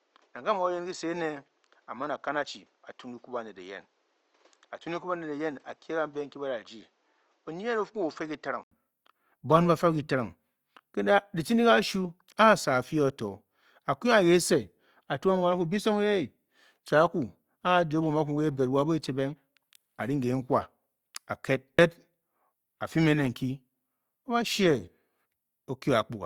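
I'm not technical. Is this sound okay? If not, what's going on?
No. For the first 8.7 seconds the speech sounds duller, a bit quieter and with a little background noise, then after a brief gap of about 80 ms it opens up and clears. That's most likely an input switched to a poorer device, a lesser microphone or headset that cuts the crisp top end.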